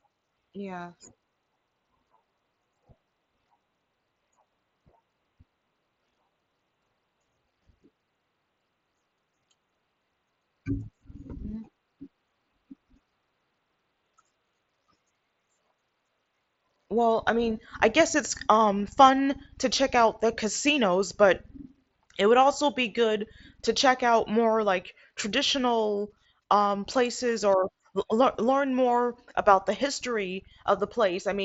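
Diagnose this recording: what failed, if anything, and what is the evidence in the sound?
Nothing's broken here: the speech comes through a Bluetooth mSBC headset link doing its normal job, which is why the top end stops at about 7.7 kHz, and there's no fault to find anywhere in the recording.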